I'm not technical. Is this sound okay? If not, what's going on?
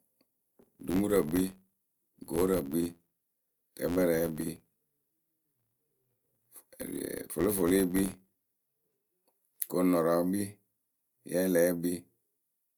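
No. From 0.0 to 8.95 s there is a filter restarted on every block. A processing step forgets its place at each new chunk of audio, so every chunk starts with a tiny click. These merge into an 86 Hz buzz, fitting 512-sample chunks, that follows the speech's loudness.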